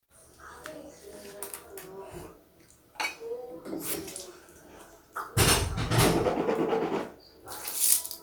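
At 3.93–3.95 s a skip ahead drops about one and a half seconds of sound, splicing both sides together with no gap; spectrograms show an abrupt vertical seam.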